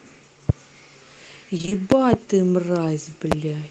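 At 0.49 to 0.52 s a single sharp loud pop jumps out, roughly 20 dB above the speech, which carries on underneath. The likely cause is a sudden voltage pulse from a plug, switch, static or driver glitch reaching the signal path.

From 1.57 to 1.73 s the speech turns choppy. This is repeated packet loss (robotic sound): four short gaps, none longer than 20 ms, with half of that span patched by stretching the last sound and the rest missing.

At 1.92 to 2.16 s two pops arrive in quick succession, and at 3.32 to 3.34 s one more. Each is again about 20 dB above the speech and likely comes from the same kind of electrical pulse.

Through the call path the speech tops out around 12 kHz, which fits a 24 kbps Opus stream.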